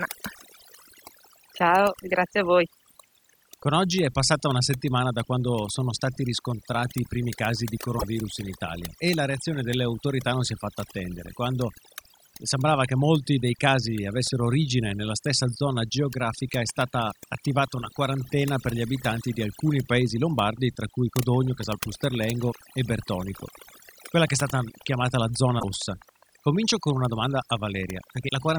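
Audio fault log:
Throughout: overdone noise removal. The gaps between phrases drop to near silence scattered with twinkling specks. The noise reducer was pushed too hard. It pulls each frequency band down or out whenever that band sits close to its noise estimate, so the quiet parts of the voice are stripped away along with the noise. Isolated bands that survive flicker on and off as the specks.
7.98–8.04 s, 25.59–25.64 s and 28.28–28.30 s: broken MP3 bit reservoir. At each point the audio lurches forward with a brief chirp, burst of noise or hole lasting a few tens of milliseconds, about one to two frames of 26.1 ms, which fits MP3 framing. The likely cause is missing frames. The next frame then reaches back into the reservoir for borrowed data, finds another frame's bytes and decodes garbage until it resyncs.
21.28–28.57 s: train of clicks. Sharp, near-identical ticks run steadily at 14.9 per second to the end of the clip, about a hundred in all, peaking at about the level of the speech itself. 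They carry on through the pauses as well as under the speech, so they sit on top of the audio rather than coming from it. The regular pacing points to a likely cause in interference from nearby equipment or a faulty connection injecting a pulse at a fixed rate.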